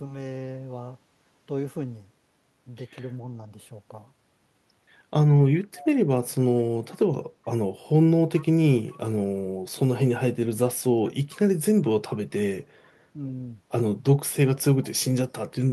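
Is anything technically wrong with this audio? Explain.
Yes. An echo leak appears at 5.75 to 5.86 s, 8.38 to 8.46 s, 12.13 to 12.17 s and 14.84 to 14.9 s. Brief, faint scraps of speech return about 424 ms late, likely from a far-end loudspeaker that the echo canceller did not fully cancel.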